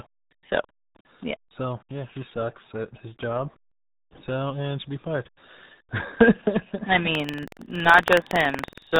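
From the first moment to the last, the speech sounds muffled and gargly, with everything above 4 kHz gone and a heavy, smeared texture over every syllable. This is the RealAudio 14.4 codec, RealAudio 1, a dial-up era speech coder whose very low rate fits 8 kbit/s. At that rate it cannot carry the upper band at all, and the coarse model of the voice it keeps leaves heavy audible damage.

At 7.11 s a steady robotic rattle at 21.5 Hz joins the sound and continues to the end. This is buffer tearing: the writing side of a ring buffer and the playback side have drifted so that they cross inside each period, which fits a 2048-sample buffer. A small sliver of every buffer, roughly a few percent, replays audio from about a fifth of a second earlier, and the hard joins at both edges repeat at the buffer rate as the buzz.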